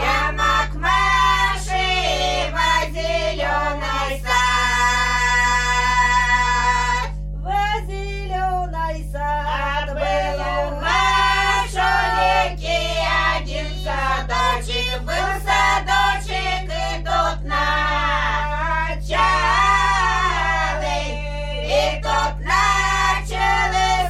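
From start to finish, mains hum: a ground loop or nearby transformer leaks the 50 Hz power line into the signal, laying a steady low drone almost as loud as the sound itself.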